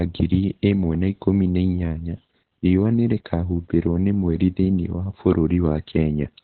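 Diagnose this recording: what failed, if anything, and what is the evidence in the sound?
The codec stage failed. The whole recording carries heavy Opus voice compression damage. Nothing reaches above 4.2 kHz, so the speech sounds muffled. It is also hoarse and slightly robotic. That fits narrowband SILK coding near 8 kbps, where the excitation is coded coarsely.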